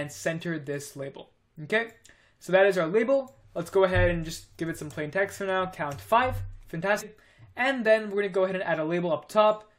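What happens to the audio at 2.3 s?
Nothing goes wrong at 2.3 s; the audio plays through that moment intact, with no dropout, click or other fault.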